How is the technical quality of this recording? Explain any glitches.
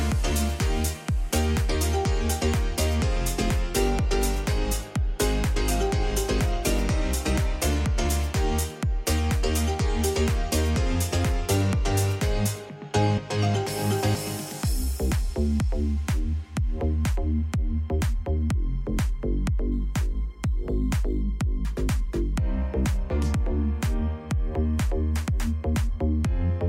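One glitch stands out. From 19.72 to 21.22 s, crude rate conversion repeats samples without filtering, fitting 44.1 kHz to 48 kHz. This adds a gritty, inharmonic fizz roughly 35 dB down.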